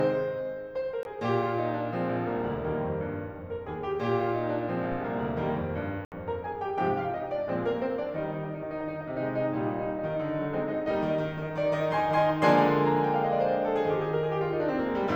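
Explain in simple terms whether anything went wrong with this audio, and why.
A Bluetooth stall most likely happened twice: interference held up the wireless packets, so the headphones used up their stored music and had to pause until the missing data arrived. The music drops to silence at 1.03 s for about 20 ms and at 6.05 s for about 70 ms, then carries on.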